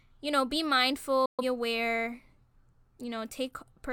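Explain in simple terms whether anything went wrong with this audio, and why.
Digital broadcast dropout: the receiver lost a few signal frames and muted itself, so the speech drops to silence at 1.26 s and returns at 1.44 s.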